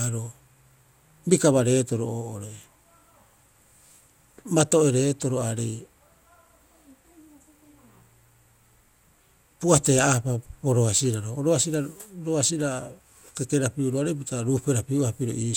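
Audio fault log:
Throughout: generation loss. The speech sounds swirly, smeared and hollow, with consonant attacks blurred and nothing above 17.9 kHz. This is likely repeated lossy re-encoding, with the character pointing to around ten passes through an MP2 chain near 128 kbit/s. Each pass quantises again on a shifted frame grid, so quantisation noise builds up, making the sound worse than a single encode at that rate would.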